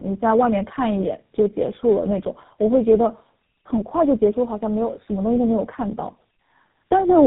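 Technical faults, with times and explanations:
throughout: tandem speech coding. The speech passes through a G.729A coder, a G.711 link, then GSM full rate, so the second low-rate coder reworks the first one's damage, leaving rough, muffled, warbly speech. A spectrogram shows nothing above 3.8 kHz and smeared, blotchy harmonics.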